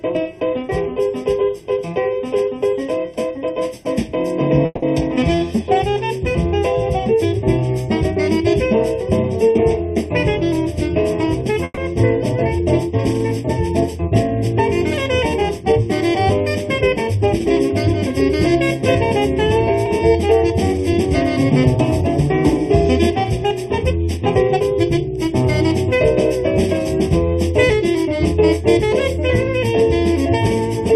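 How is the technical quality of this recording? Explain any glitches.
The recording has three distinct problems: a constant phasey coloration and, at several points, brief stalls and stretches of slightly faster playback.

Channel delay (comb filtering) runs through the whole clip. One channel trails the other by roughly 0.4 ms, and when the two are summed to mono, components they share cancel at evenly spaced frequencies, the first around 1.5 kHz. The result is a hollow, phasey tone. On a spectrogram this appears as fixed dark horizontal bands at regular frequency intervals, unchanged for the entire 31 seconds.

A call audio freeze occurs at 4.65 to 4.84 s and again at 11.64 to 11.79 s. At these points the receiver ran out of audio, likely because packets were held up in transit, and it extended the last sound for about 170 ms and then 130 ms, each ending in roughly 20 ms of silence. Nothing is lost. 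The audio resumes where it stopped, arriving later. A spectrogram shows smeared, static bands fading into a thin dark gap.

Jitter buffer speed-up affects three stretches: 10.44 to 11.52 s at 104% speed, 15.42 to 17.22 s at 103%, and 19.19 to 24.60 s at 104%. Together these trim about 50, 70 and 200 ms. After a backlog built up, the receiver cut many tiny pitch-period pieces to reduce delay, so the audio runs slightly faster at the same pitch. The waveform shows closely spaced micro-splices, with no obvious gap.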